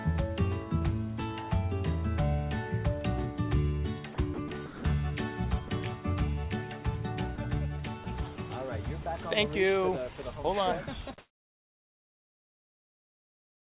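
The audio arrives over a narrowband call path with nothing above 4 kHz, which fits G.711 A-law at 64 kbps. Between 4.14 and 4.84 s it is sound chopped by the voice detector: about 280 ms in total is swapped for synthetic fill as transmission toggles on and off, so the sound stutters, likely from an overly aggressive detector. Brief dropouts, sound dropped by the voice detector, occur at 5.68, 7.36, 8.04 and 8.36 s, each 20 ms, and at 9.02 to 9.06 s, 40 ms. Each is a short gap filled with comfort noise, likely where quiet sound was misjudged as background. From 11.18 s to the end, comfort noise in place of the background takes over. The real background, about 37 dB below the loud passages, gives way to a featureless hiss with a level shift of about 30 dB, likely because the sender stopped transmitting during the pause.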